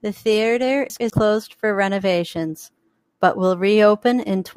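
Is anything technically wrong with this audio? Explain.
Yes. Between 0.9 and 1.1 s the speech has chunks out of order: two 100 ms blocks play swapped, with one arriving a chunk late and landing after the block that should follow it. Nothing is missing and nothing repeats, which separates it from a dropout or a stutter. Instead the syllables come out briefly scrambled across three abrupt joins where the waveform fails to line up.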